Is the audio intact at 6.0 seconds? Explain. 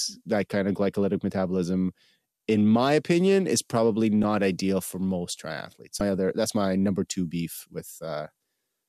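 No. From 5.98 to 6.01 s, damaged data in the compressed speech stream leaves the decoder unable to read a frame, so it loses sync and hunts for the next valid header. For those 30 ms the sound turns into a chirp, click or short hole.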